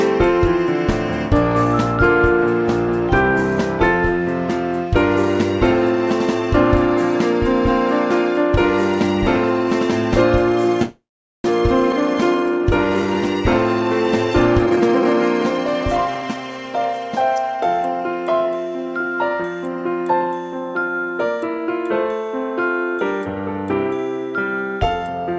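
From 10.82 to 11.46 s there is a call audio freeze. The last sound carries on as a fading buzz and then drops to about 440 ms of silence. The likely cause is delayed packets draining the jitter buffer. The audio resumes where it stopped, so nothing is lost, unlike a skip.

Between 11.92 and 11.95 s comes a skip ahead. Roughly 150 ms of audio is dropped and the two sides are joined almost seamlessly. Unlike the freeze, this adds no gap, and the sound simply jumps forward.

From 11.97 to 13.22 s a jitter buffer slow-down plays the audio at 88% speed with unchanged pitch. The receiver repeats pitch periods to add 151 ms of reserve, which draws sounds out. This is a gradual stretching rather than a pause.

From 14.59 to 16.94 s a jitter buffer speed-up runs the audio at 126% speed, still at the same pitch. Short pitch-period slices are cut out, roughly 0.7 s in total, to shrink the backlog. 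The result sounds hurried, whereas the skip is one abrupt jump.

Throughout the clip, the call path's band limit means nothing is heard above 8 kHz, which fits a G.722 codec.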